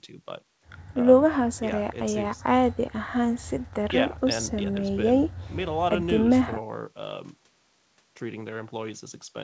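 No technical faults can be heard in the speech, which carries the steady coding texture of a call path and has nothing above 8 kHz, consistent with a wideband codec such as G.722.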